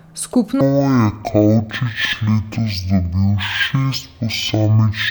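From 0.61 s to the end, the speech drops to half speed and a full octave low: a stereo read as mono fault, where interleaved left and right samples get played back-to-back as one channel. There's also a fainter mirrored copy up in the top half of the spectrum.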